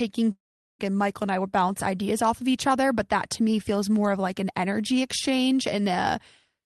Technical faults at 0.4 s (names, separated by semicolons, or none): long network dropout